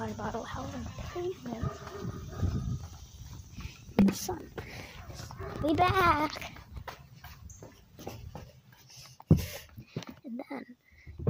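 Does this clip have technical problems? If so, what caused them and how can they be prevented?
Yes. From 2.80 to 7.35 s, periodic USB or driver dropouts tick every 64 ms: a background task stalls the bus or driver, and about 2 ms of sound is replaced by silence each time. The strict regular spacing distinguishes them from random clicks or irregular underruns. Prevent them by disabling USB power saving, updating the audio driver, and stopping background polling tasks.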